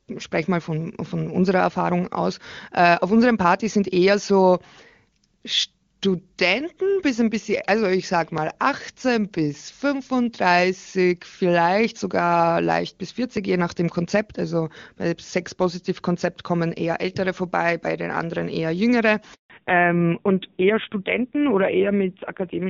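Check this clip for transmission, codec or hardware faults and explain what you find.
Two faults appear near the end: a handover gap and a fallback to narrowband.

At 19.34 s the speech cuts out for 160 ms, until 19.50 s. This is a handover gap. The call switched networks, and no speech frames arrived during the switch. The sound fades within milliseconds, leaves silence, and whatever was said then is lost.

From 19.50 s to the end, the call falls back to narrowband. Before this, the audio has the clear, full top end of AMR wideband (HD Voice), which fits a high-rate mode. Afterwards nothing above 4 kHz remains. The speech turns dull and rough, which fits a low-rate narrowband AMR mode.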